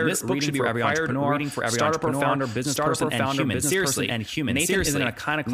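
Speech, carrying a doubled audio track throughout. A second, equally loud copy trails about one second behind, dry and full-band. Likely cause: a slower second capture path, or an edit holding two copies.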